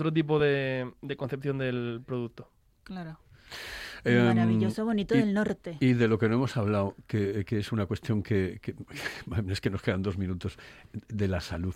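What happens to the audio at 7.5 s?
Nothing goes wrong at 7.5 s; the speech there plays through cleanly, with no dropout, click or distortion.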